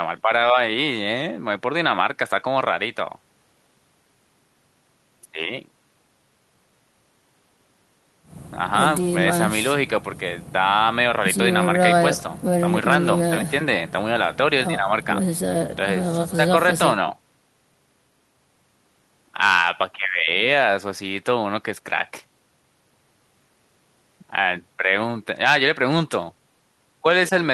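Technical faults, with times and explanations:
No technical faults can be heard in this speech clip.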